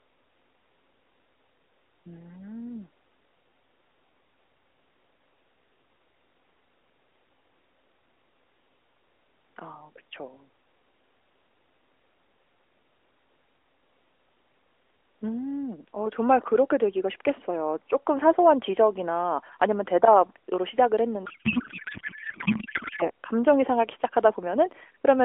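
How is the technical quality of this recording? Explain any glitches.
The recording is narrowband, phone-band speech between 300 Hz and 3.4 kHz, with the light coloration of AMR-NB coding, and it has one clear glitch.

From 21.26 to 23.10 s the speech collapses into garbled, warbling noise that barely follows it. This is a codec payload misread: octet-aligned AMR frames were decoded as bandwidth-efficient, so every field landed out of place.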